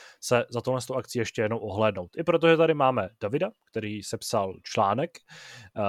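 No technical faults can be heard anywhere in this recording.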